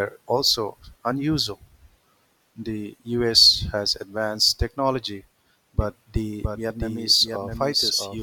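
Speech, with a doubled audio track kicking in abruptly at 5.81 s and running to the end. A second, slightly quieter full-band copy trails about 0.7 s behind, dry with no room tail, likely from a slower second capture path or two misaligned copies in an edit.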